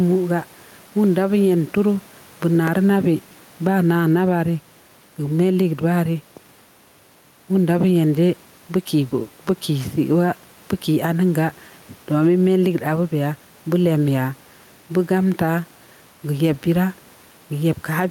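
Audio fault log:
Throughout, gain pumping: the gain swings by roughly 5 dB, and the room noise sits about 34 dB below the speech. Loud and quiet syllables come out closer in level than they should, so the speech sounds squashed. This is likely input gain set too high, with a fast limiter or compressor clamping down on every loud peak and releasing in the gaps.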